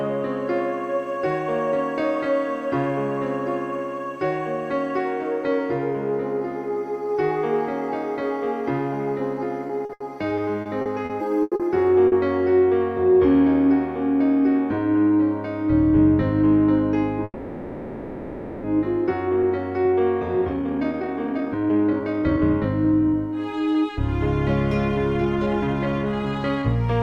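From 9.67 to 11.63 s, repeated packet loss (robotic sound) sets in. Nine separate holes open in the stream, the longest about 90 ms, and each is patched by stretching the preceding sound. Roughly a fifth of the stretch is synthetic fill, so the audio turns choppy, with about 320 ms genuinely missing.

At 12.08 s comes a single short concealed packet loss. About 40 ms failed to arrive and was replaced by a continuation of what came just before, then blended back. It is heard as a brief smear, and whatever fell in that instant is lost.

Between 17.24 and 18.67 s the sound stalls in a call audio freeze, likely because packets were held up in transit and the jitter buffer drained. About 1.4 s of fading filler, ending in a 30 ms silence, is inserted. The audio then resumes where it stopped, with nothing dropped.

A jitter buffer speed-up runs from 19.29 to 23.97 s, and a second from 24.99 to 26.63 s. 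Excess buffered delay is being trimmed by cutting out pitch-period-sized slices, roughly a second in the first stretch and about 0.3 s in the second. The sound plays about 22% and then 18% fast, hurried but at unchanged pitch.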